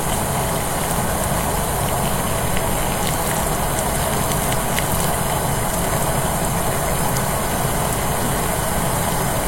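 Nothing stood out as a technical problem on listening to these everyday sounds.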